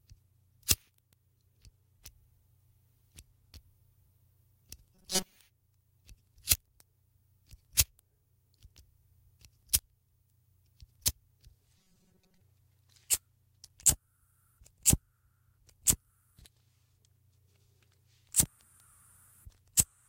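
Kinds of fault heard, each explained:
Robotic sound from repeated short buffers: twice the audio turns into a rigid, metallic buzz pitched at 188 Hz, from 4.95 to 5.38 s and again from 11.78 to 12.41 s. That steady pitch fits a tiny chunk of about 5.3 ms being looped over and over, likely because fresh audio isn't arriving in time. In the first stretch about half the sound is repeats; in the second it's most of it.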